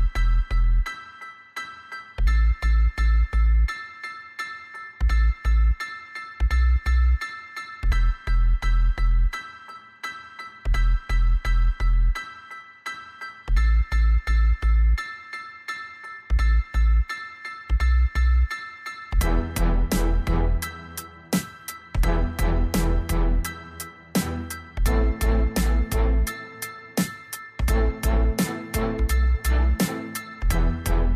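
No technical faults are audible.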